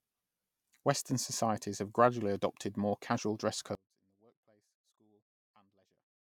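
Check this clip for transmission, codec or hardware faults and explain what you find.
One fault is present, in the latter part of the speech. From 3.75 s to the end at 6.27 s, just after "adopted more casual dress", the voice drops by about 36 dB to a faint residue. This fits one channel inverted. One stereo side's polarity is likely reversed, so the centred voice cancels on mono summing and only the small inter-channel difference remains.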